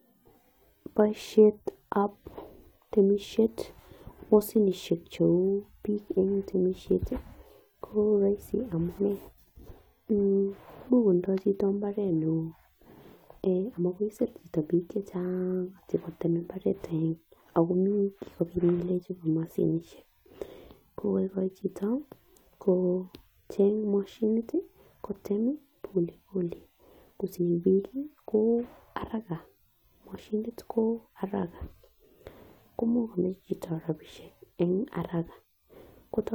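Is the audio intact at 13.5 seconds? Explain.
Yes, the speech at 13.5 seconds plays through intact, with no audible fault at that moment.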